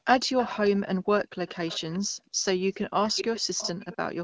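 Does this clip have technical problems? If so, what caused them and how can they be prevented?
Yes. Background gated by the echo canceller appears at 0.00 to 0.06 s and again from 2.04 to 2.45 s: the room sound drops by about 40 dB and then returns. While the far-end loudspeaker was active, the canceller clamped the microphone path hard, suppressing ambient noise along with any echo, so the background vanishes for roughly a moment and then comes back. Gentler suppression with comfort-noise fill would prevent the audible holes.

Echo leak is heard from 0.38 to 0.70 s, 1.47 to 1.99 s, 3.05 to 3.41 s, 3.57 to 3.72 s and 3.92 to 4.12 s. A delayed copy of the speech comes back 444 ms late in the first two stretches and 540 ms late in the last three. It sits about 10 to 25 dB below the main speech. This is likely a loudspeaker-based device whose echo canceller failed to remove everything its microphone picked up. 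Using a headset or improving the canceller's adaptation to the shifting echo delay would prevent it.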